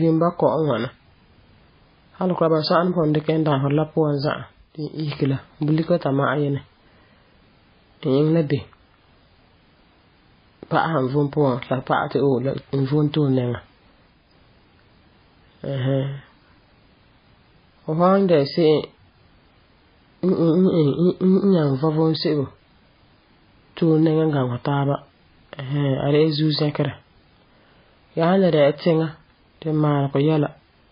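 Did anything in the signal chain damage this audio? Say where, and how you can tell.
Yes. Throughout, the speech sounds dull and watery, with nothing at all above 5 kHz and heavy smearing. This points to the codec stage, likely MP3 compression at a very low bitrate, around 17 kbps, where the encoder cuts the treble and drops weak frequency lines.

At 4.17–5.37 s, and again at 13.79–14.36 s just after "vom tole nɛŋa", a single 5.2 kHz tone swells over roughly half a second and then about 0.4 s into a loudspeaker feedback squeal, about 10 dB and then about 5 dB above the speech. The microphone picked up its own loudspeaker, closing an acoustic loop at capture.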